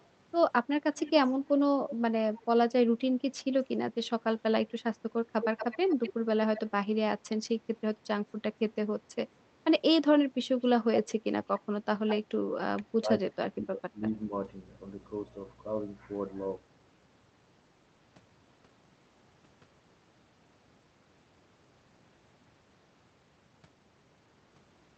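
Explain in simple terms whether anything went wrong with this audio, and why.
Yes, two kinds of fault can be heard in this speech.

Echo leak: a delayed copy of speech trails in about a quarter of a second late (roughly 0.21 to 0.27 s) at 0.00 s, 0.97–1.12 s, 1.89–2.45 s, 5.41–6.61 s, 10.61–11.12 s and 12.08–12.16 s. The first is barely audible, and the one at 5.41 s is the clearest. The likely cause is a loudspeaker at one end whose echo canceller let some of its own playback slip back into the call. Unlike a room's reverberation, this is a separate, distinct repeat, not a smooth tail.

Speech suppressed in double talk: the talker's level dips while both sides seem to be talking at once. There is a slight, brief dip at 1.58–1.64 s. A much deeper one happens between 11.96 and 14.33 s, where the voice keeps sinking or cutting out in pieces for about a second and a half in total. This is likely the echo canceller turning everything down because it couldn't separate the talker from the echo. 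The difference from echo leak is that something is taken away here, not added.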